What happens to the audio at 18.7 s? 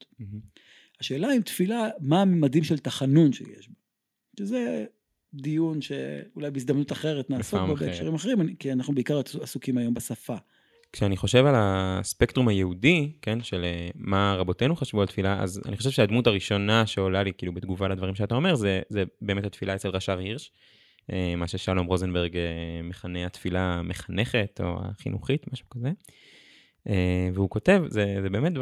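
Nothing goes wrong at 18.7 s; the speech carries on intact through that moment, with no dropout, click or other fault.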